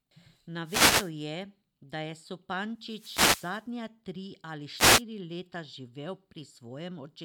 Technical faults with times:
0.64-1.12 wireless microphone noise hit
2.80-3.69 wireless microphone noise hit
4.75-5.03 wireless microphone noise hit

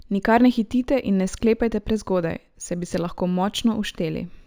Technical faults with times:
0.00-4.47 imaging from linear upsampling

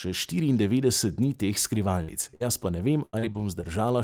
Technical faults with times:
2.03-2.10 burst of packet loss
2.31-2.43 short concealed packet loss
2.35-2.42 burst of packet loss
3.05-3.65 repeated packet loss (robotic sound)

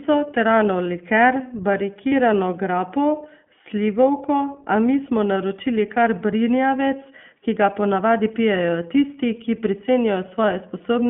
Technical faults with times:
0.00-11.10 iLBC codec
2.09-2.13 lost iLBC frames

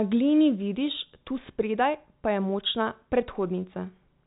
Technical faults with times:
none

